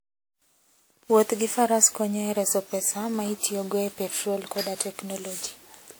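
Across the whole speech clip there is generation loss. Swirly, smeared and hollow texture blurs the attacks, with nothing above 20.1 kHz, likely from repeated lossy re-encoding, around four passes, in something like WMA at roughly 96 kbit/s, each pass adding fresh quantisation noise and spectral holes.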